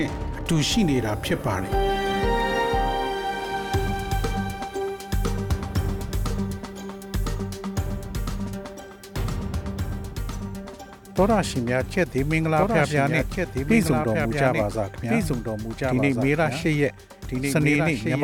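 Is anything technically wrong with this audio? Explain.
Yes. A doubled audio track runs from 12.48 s to the end: a second full-band copy enters abruptly, trailing about a second and a half behind, somewhat quieter and without room colour, likely from a second, slower capture path.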